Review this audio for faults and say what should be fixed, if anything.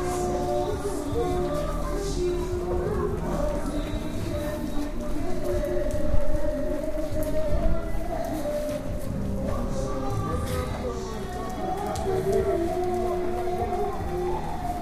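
A drift correction step raises speed 5.8% and pitch 98 cents from 6.82 to 7.46 s, then lowers both 104 cents from 10.88 to 12.68 s. The likely cause is clock-matching software jumping playback rate; spectrogram lines shift abruptly and snap back. Prevent it by resampling gradually with small continuous rate adjustments instead of single large steps.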